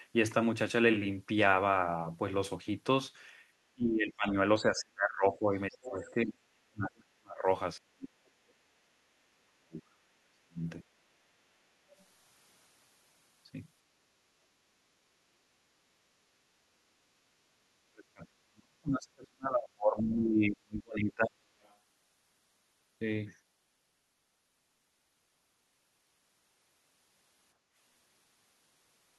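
From 3.74 to 7.47 s the speech keeps dipping and breaking up, by around 40 dB at its worst, for about three seconds in total. This is speech suppressed in double talk, likely because both ends were talking and the echo canceller, unable to tell the local talker from loudspeaker echo, pulled everything down. On a spectrogram the harmonics and upper bands fade or vanish in patches, and the waveform envelope collapses into ragged gaps.

Inside that stretch, at 5.33–5.38 s and again at 5.83–6.11 s, faint scraps of the other side's voice leak through, about 30 dB and then 20 dB below the talker. These are likely residual echo the canceller failed to remove from the microphone. They show as thin, weak, out-of-place harmonic traces with no matching energy from the main talker.

The same suppression returns from 7.82 to 10.66 s, with drops of around 35 dB over about three seconds. Another tiny leak follows at 11.99–12.04 s, some 40 dB down and barely visible as a faint smear.

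From 17.85 to 21.44 s the longest suppression hits, around 40 dB deep and about four seconds in total, with the same patchy spectral holes. It is followed by a brief leak at 21.63–21.76 s, also roughly 40 dB down.

At 27.57–27.74 s the room background is gated by the echo canceller. The noise floor drops by about 8 dB for roughly 150 ms while the loudspeaker plays, then recovers. On a spectrogram this appears as a short, uniformly darker vertical band across the background, with a small notch in the waveform's noise floor.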